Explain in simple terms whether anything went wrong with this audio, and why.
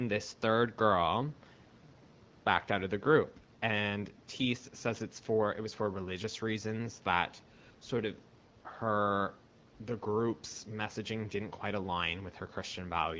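Nothing went wrong: the speech carries the normal call microphone processing, which removes the deepest bass and leaves nothing above 8 kHz, and the AMR wideband (HD Voice) codec's light coding touch, which is typical of an HD Voice call at a rate that keeps speech clear.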